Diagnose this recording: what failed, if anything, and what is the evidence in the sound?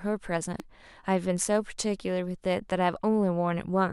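A voltage step, likely from a plug, switch or static discharge in the analogue wiring, entered the signal chain. It produces a single loud pop from 0.60 to 0.62 s, peaking roughly 10 dB above the speech, which carries on uninterrupted beneath the transient.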